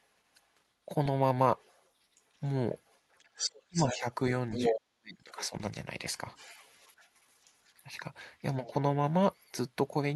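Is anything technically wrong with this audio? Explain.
Yes. Two related faults appear, both pointing to echo cancellation on a loudspeaker call.

The other side's voice leaks through at 1.57–3.98 s, about 10 dB below the talker, and at 4.51–4.74 s at roughly equal level. Fainter scraps follow at 6.36–7.84 s, about 25 dB down, and at 8.67–8.72 s and 9.33–9.51 s, about 35 dB down. The likely cause is an echo canceller that left loudspeaker sound in the microphone signal.

Speech is suppressed in double talk at 3.68–4.05 s and 4.69–5.53 s, where both sides overlap. The talker's voice dips, by about 30 dB and then about 40 dB. The affected spans total roughly a fifth and seven tenths of a second. The canceller likely could not separate the talker from the echo, so it attenuated both.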